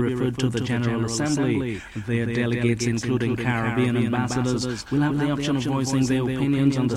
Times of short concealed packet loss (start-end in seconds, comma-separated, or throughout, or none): none